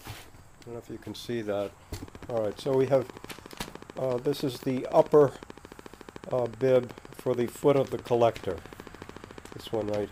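From 2.08 s to 10.04 s a train of clicks runs at a regular 13.7 per second, around a hundred in all, peaking about 5 dB above the sound. The pulses likely come from electrical interference or a faulty connection or power supply, ticking steadily through pauses as well.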